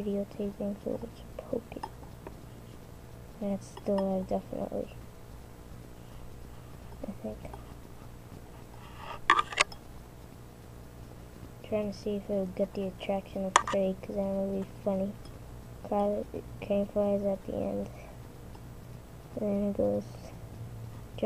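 No technical faults turn up anywhere in the audio, so there is nothing to describe in time order.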